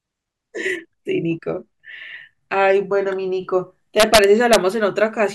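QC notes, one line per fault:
4.00–4.56 s, integer overflow: in this stretch of speech the signal is driven about 3 dB past full scale, and instead of being held at the ceiling the loudest peaks wrap around to the opposite extreme of the integer range. Each wrapped sample is a near full-scale jump in sign, heard as harsh cracks far sharper than clipping. On the waveform, peaks snap from top to bottom rather than flattening; the spectrogram shows bright vertical broadband streaks at each crack.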